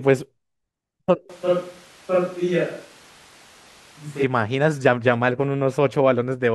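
A switch to a distant microphone runs from 1.30 s to 4.24 s. At 1.30 s the speech turns roomy and hollow, loses bass and drops about 5 dB, while background noise rises to around 25 dB below the speech. The likely cause is that the close microphone's signal dropped out and a farther pickup, such as a camera microphone, took over. At 4.24 s the close, fuller sound returns just as abruptly.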